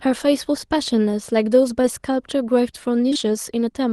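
At 1.81 to 1.85 s, and again across two back-to-back gaps from 3.09 to 3.17 s, short concealed packet loss leaves brief smears in the speech. Each gap is about 20 ms of audio that reached the receiver too late. The decoder extended the preceding sound and then crossfaded back. On a spectrogram these spans show frozen, slightly blurred harmonics or flat noise instead of a dropout. The waveform stays continuous but loses its fine detail. Everything sits under a band edge near 12 kHz, which fits a low-bitrate Opus call.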